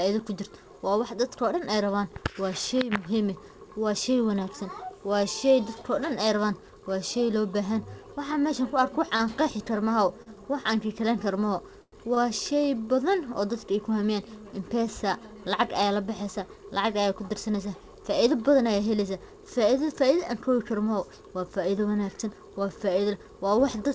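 At 9.16 s the speech hangs briefly. This is a short stall from a late packet. A packet arrived late and the jitter buffer ran dry. The receiver held the last sound for about 36 ms, then carried on from the same point. Nothing is lost. The sound just lingers with a slight buzz or dip. The same happens at 10.22 s, for about 38 ms, and at 12.14 s, for about 21 ms.

At 11.82 s there is a longer break, lasting until 11.94 s. This is a call audio freeze. About 101 ms of the audio is stretched fill. The last sound carries on as a buzz or hiss and fades, then about 50 ms goes silent. The speech then resumes where it stopped, with nothing cut. The likely cause is packets held up in transit long enough to empty the jitter buffer.

From 22.08 s to 23.12 s the speech runs hurried. This is a jitter buffer speed-up. The buffer had built up extra delay after the earlier stalls. To shed it, the receiver cut many tiny slices, each one or a few pitch periods long. 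Altogether it removed about a tenth of a second. Playback runs at about 108 percent speed. The pitch stays the same, but the pacing feels rushed. The call path itself carries nothing above 8 kHz, which fits a wideband call codec such as G.722.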